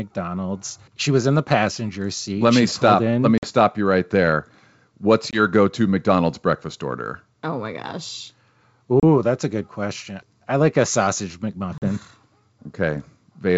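At 3.38 s (before "you right there"), 5.31 s, 9.00 s (before "that's a good question") and 11.78 s (after "I like a sausage"), there's packet loss on an ADPCM call. Silent holes of 50, 20, 30 and 40 ms throw the decoder's predictor out of step, so the speech comes back slightly distorted over the clean G.722 wideband.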